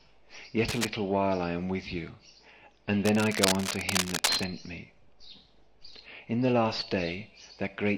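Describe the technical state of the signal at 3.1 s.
At 3.1 s the signal carries cable scratch noise, running from 3.05 to 4.44 s: dense, uneven bursts of scratching and rustling at roughly the level of the sound itself, likely from a worn cable or connector whose contact resistance fluctuated while being moved.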